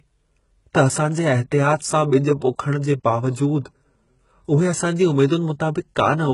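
All the way through, the speech has bright but synthetic treble, gritty, lispy s sounds, and nothing above 11.1 kHz, likely heavy HE-AAC compression at a very low bitrate, around 12 kbps.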